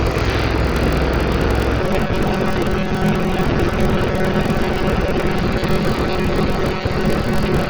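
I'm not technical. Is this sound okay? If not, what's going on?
No. Three problems can be heard.

The first is AAC compression damage, likely from squeezing the file too hard. The sound is dull and lacks sparkle. The codec threw away detail it judged unimportant, and that loss is plainly audible. Sustained sounds and hissy sounds get a smeared, fizzy, slightly watery texture. This runs through the whole clip.

The second is a block size mismatch (padded). One part of the system hands over chunks of audio that are too short for the next part. The gap in each chunk is filled with silence. Those tiny silences repeat about 43 times a second, which causes a low, steady buzz under everything. The extra silence also stretches the audio, so it plays at about 86% of normal speed. This also lasts the whole clip.

The third is a robotic sound from repeated short buffers. It starts at 1.81 s and continues to the end. 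New audio likely arrives too slowly. To fill the gaps, the software keeps replaying the last tiny slice it has, while roughly 70% of the real audio is skipped. The constant repeating imposes a fixed hum at about 188 Hz. The result is a rigid, metallic, buzzy tone that only loosely follows the original sound.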